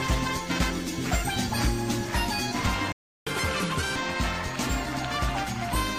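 At 2.92 s the sound cuts out for about 0.35 s, leaving a flat gap in the waveform and a blank vertical band on the spectrogram. This is likely a playback stall, with the player starved of data or its thread blocked. From 3.27 to 3.96 s comes catch-up at higher speed. The backlog plays at 1.5 times normal speed, lifting pitch by roughly seven semitones, so spectral lines jump upward and events bunch together before returning to normal.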